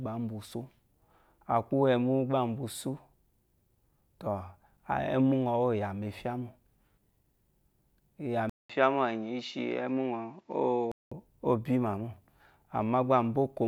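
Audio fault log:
8.50–11.12 s, input switched to a poorer device: after a 200 ms silence the sound loses everything above 7.6 kHz and turns dull, with a faint new background noise far beneath it and no level change, likely a narrower-band microphone taking over until the original returns.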